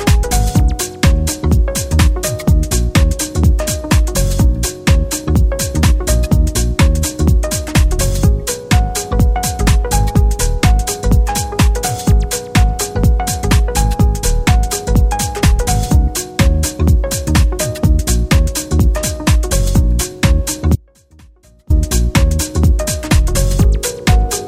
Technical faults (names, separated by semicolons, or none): audio dropout to a faint residue